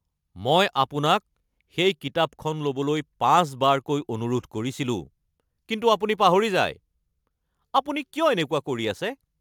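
Throughout the speech there is sample clock jitter: the converter's clock wanders by a few microseconds, so samples land slightly off time. The resulting error, roughly 35 dB below the signal, is heard as a fine hiss that thickens on loud, bright passages and disappears in pauses.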